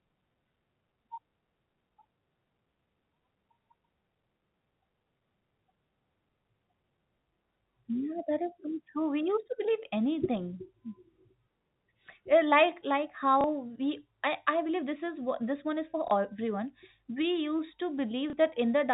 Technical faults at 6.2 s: none

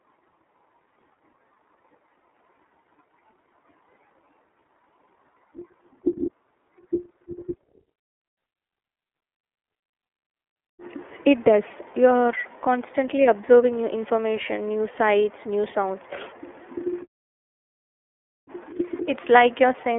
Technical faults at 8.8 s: iLBC codec

